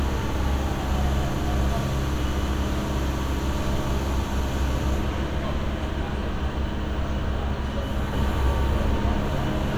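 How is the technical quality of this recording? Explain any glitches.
There's one clear glitch, and it runs right to the end. From 8.13 s a doubled audio track kicks in: a second, full-band copy of the sound trails the original by roughly 300 ms, about as loud as the first. It has no decay or room colour, and it switches on abruptly. The likely cause is the same audio getting captured twice, once through a slower path, or an edit leaving two copies out of step.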